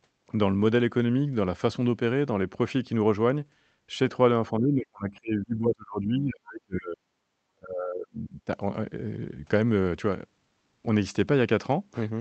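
Speech that keeps ducking out: from 4.59 to 6.98 s and again from 7.52 to 8.49 s the talker drops by something like 35 dB, which sounds like speech suppressed in double talk, likely an echo canceller clamping down while both ends were talking.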